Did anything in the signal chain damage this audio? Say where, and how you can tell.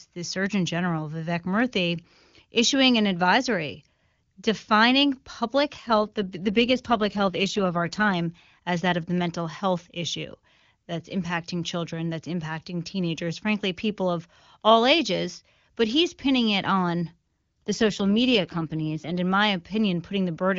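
Yes, at the network stage, as AMR rate drops. From 5.77 to 8.14 s (after "an advisory defining public", until "as that of the") and from 17.66 to 19.18 s (after "he's pinning it on", until "in my"), the voice turns rough and synthetic, then clears. The link forced the AMR-WB codec down in rate, which fits a fall from 23.85 to 8.85 kbit/s. On a spectrogram the band still reaches 7 kHz with no dropout, but harmonics blur into noisier texture. The waveform stays continuous.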